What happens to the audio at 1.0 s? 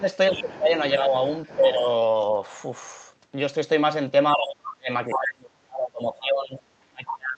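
From 1.01 to 1.13 s the speech dips by roughly 5 dB, likely speech suppressed in double talk, with the echo canceller attenuating overlapping talk it mistook for echo.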